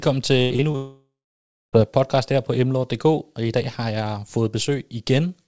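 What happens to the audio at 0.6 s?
Packets were repeatedly lost between 0.42 and 0.76 s, giving repeated packet loss (robotic sound). Four gaps, the longest 83 ms, were patched by extending the preceding sound, so about 41% of that stretch is concealment, heard as choppy speech with missing pieces.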